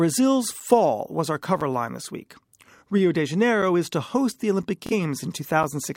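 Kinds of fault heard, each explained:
Gap between chunks: at 0.60 s, just before "was our", and at 1.61 s, just before "line this week". The audio arrives in one-second pieces, and a 6.5 ms hole of silence sits at each join, interrupting the speech without removing any.
Bluetooth stutter: from 2.78 to 2.82 s, after "line this week", and from 4.86 to 4.92 s. Late audio was covered by repeating the last short slice, giving a brief stutter. About 23 ms goes missing at the first and 46 ms at the second, suggesting one and then two lost packets.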